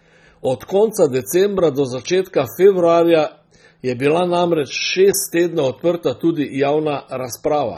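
Throughout the speech the sound is dull and smeared, with a fizzy, warbling texture on sibilants and held sounds, and nothing above 17.5 kHz. This is likely AAC compression, with sparse quantisation leaving spectral gaps, which fits a low AAC-LC bitrate around 24 kbps.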